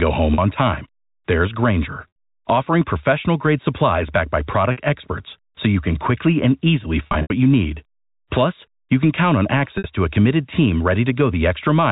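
Speech over a telephone-band channel, cut off at 4 kHz in the spectrogram, with packet loss with pitch repetition at 0.34–0.38 s, 2.08–2.16 s (before "offering professional grade supplies"), 4.72–4.77 s, 7.04–7.30 s (scattered between "can quickly and easily" and "you need"), and 9.78–9.84 s (between "you can count on" and "to a committed team"). The receiver loops the last pitch cycle to fill each gap, so the 40–80 ms losses sound briefly held and buzzy. The waveform shows identical repeating periods that fade out, and the spectrogram shows flat, frozen harmonic stripes.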